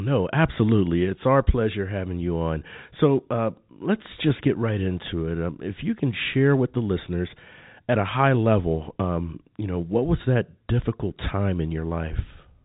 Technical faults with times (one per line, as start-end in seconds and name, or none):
none